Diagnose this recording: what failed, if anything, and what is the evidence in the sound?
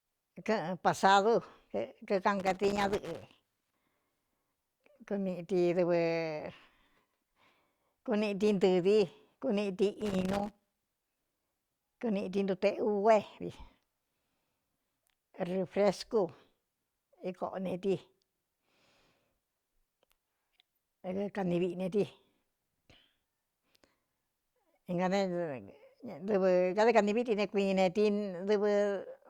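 The analogue wiring failed: loose connector crackle interrupts the speech from 2.40 to 3.80 s and again from 10.01 to 11.81 s, between "kuniꞌti ntɨɨ vi kuniꞌti" and "kuniꞌti ntuteꞌug é vi". A worn contact making and breaking chops the signal, giving irregular dropouts and spikes in the waveform and scattered broadband vertical streaks on a spectrogram.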